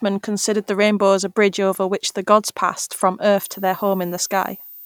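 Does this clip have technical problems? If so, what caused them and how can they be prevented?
Yes. From 3.38 s, just after "the gods passed from", to the end at 4.85 s, a switching supply whistle sits near 15 kHz, roughly 20 dB below the speech, drifting slightly between 14.5 and 14.6 kHz. A nearby switch-mode supply leaked its switching tone into the audio path. Prevention: use a linear or well-filtered supply and keep switching adapters away from microphone cabling.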